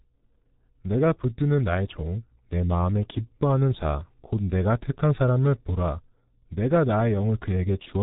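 Speech runs through the G.723.1 codec for its whole length. Nothing reaches above 3.8 kHz, so it sounds muffled. The damage is heavy. Consonants blur and the voice turns hoarse, since 30 ms frames update the model slowly. The thin detail fits about 6.3 kbit/s.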